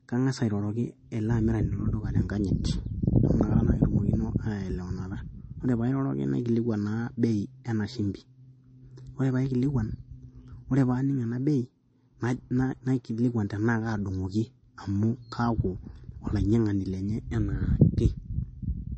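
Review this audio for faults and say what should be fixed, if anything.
Throughout the speech, a low-bitrate source was likely saved at a high bitrate. An earlier MP3 encode appears to have stripped detail that the later, larger MP3 could not bring back. The audio stops dead at about 8.3 kHz, leaving consonants dull and lacking air, and the artefacts of heavy compression persist from start to finish. Both point to a source around 32 kbit/s despite the generous container bitrate. To prevent it, re-export from the original uncompressed or high-quality master rather than re-encoding an already compressed file.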